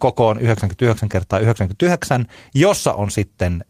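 A short recording of speech, with no technical fault to be heard in it. There is nothing in the audio that calls for a time or a cause.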